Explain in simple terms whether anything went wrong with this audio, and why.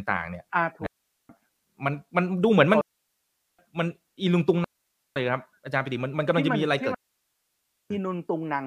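Something did go wrong here: the speech cuts out four times in a way that points to a digital wireless dropout. The gaps are at 0.86 to 1.29 s, 2.81 to 3.59 s, 4.64 to 5.16 s, and 6.94 to 7.90 s. Each lasts roughly half a second to a full second. The radio link lost too much data, so the receiver quickly faded to near silence instead of playing garbage. That's why you hear clean holes with no crackle or burst of noise around them.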